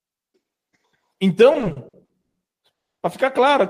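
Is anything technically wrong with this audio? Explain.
Yes, there are two faults.

From 1.53 to 2.37 s there are repeated stalls (stutter): the speech drags and catches nine times, with the sound briefly held over each gap. The holds add up to about 320 ms, the longest 140 ms, and cover roughly 38% of that stretch, yet nothing is lost. Packets were reaching the receiver late or more slowly than they were played, so its jitter buffer kept running dry and it stretched the last sound to fill each wait.

From 2.73 to 2.98 s a call audio freeze leaves a 230 ms silence, after which the speech picks up exactly where it stopped, with nothing missing and everything after it pushed 230 ms later. This was likely a single longer hold-up of packets in transit that emptied the jitter buffer. The receiver bridged the wait with silence until delivery resumed.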